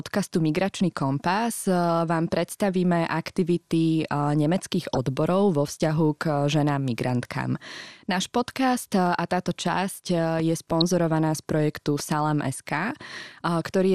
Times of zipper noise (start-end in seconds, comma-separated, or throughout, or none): none